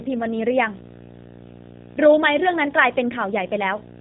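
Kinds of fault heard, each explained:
Video or display buzz: interference from a screen or video cable leaks into the audio as a steady buzz at 59.94 Hz, roughly 20 dB below the speech, with hash above it and a thin 15.7 kHz line tone. A spectrogram shows evenly spaced harmonic stripes plus one high line.
G.729 codec: a low-rate voice codec rebuilds the speech from a vocal tract model, pitch prediction and sparse pulses, giving plainly rough, synthetic-sounding speech, in line with an 8 kbit/s stream. On a spectrogram, speech content stops abruptly near 3.8 kHz, with smeared, blocky harmonics below.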